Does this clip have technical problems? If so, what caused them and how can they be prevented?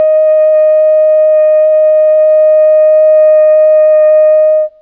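No, this clip has no technical problems, so there is nothing to prevent.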